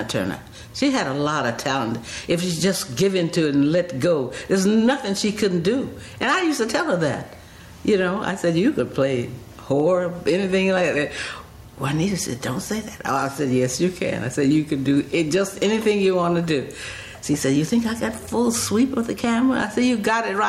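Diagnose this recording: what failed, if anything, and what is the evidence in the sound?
Input gain pumping runs throughout, most likely from gain set far too high at the input stage with a fast limiter clamping every loud sound. The level ducks by around 10 dB under loud passages, leaving loud and soft parts squashed together.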